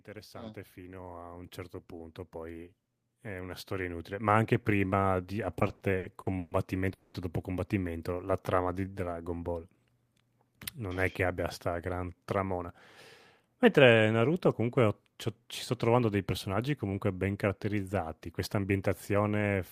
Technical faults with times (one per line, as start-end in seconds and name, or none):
0.05-4.95 automatic gain rising
5.59-6.54 repeated stalls (stutter)
6.93-7.17 call audio freeze
8.15-9.10 jitter buffer slow-down
11.25-12.64 jitter buffer speed-up
13.48-14.22 jitter buffer speed-up
18.26-18.72 jitter buffer speed-up